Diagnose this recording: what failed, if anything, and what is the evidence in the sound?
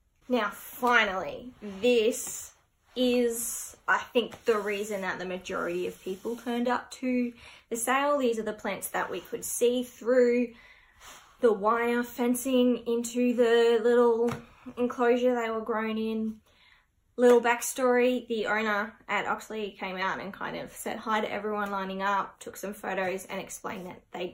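Nothing failed: no stage in the chain, from analogue wiring through conversion, buffering, processing, transmission, storage or playback, leaves any audible trace of a fault anywhere in this recording.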